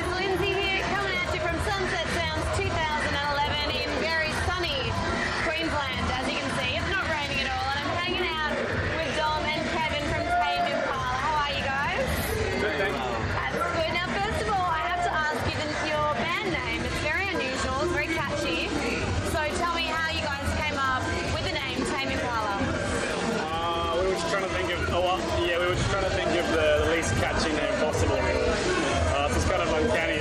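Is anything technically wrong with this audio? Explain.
No, the signal shows no technical faults.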